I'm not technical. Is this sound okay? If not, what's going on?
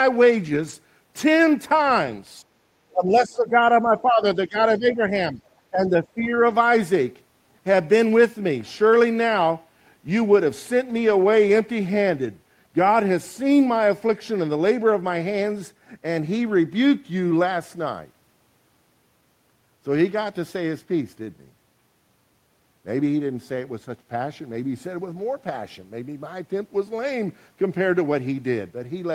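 No. Lost packet rebuilt from error correction: at 0.45 to 0.71 s, 2.05 s, 10.89 to 11.11 s, 12.19 to 12.25 s, 21.25 s and 27.03 to 27.09 s, the speech turns briefly rough and noisy. Bits of audio went missing in transit, and the player filled each gap from a lower-quality backup copy, so nothing drops out.

Speech suppressed in double talk: between 2.92 and 6.32 s, the speech repeatedly dips in volume, at 2.92 to 4.21 s, 4.47 to 4.59 s, 4.78 to 5.04 s, 5.32 to 5.40 s and 5.71 to 6.32 s. Likely both people spoke at once, and the echo remover couldn't separate them, so it turned this side down too.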